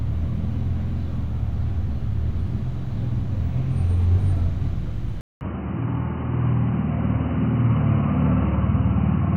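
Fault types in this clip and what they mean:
Input switched to a poorer device: At 5.21 s the sound cuts out for 200 ms. It returns duller and about 5 dB quieter, with nothing above 3 kHz and faint new background noise. The likely cause is a switch to a narrower-band input.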